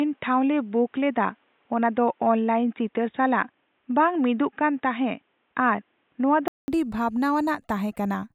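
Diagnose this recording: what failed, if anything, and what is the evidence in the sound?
Speech from 0.0 to 6.68 s is dull, with nothing above 3.8 kHz, and a faint new background noise. A 200 ms gap precedes fuller sound, likely an input switched to a poorer device.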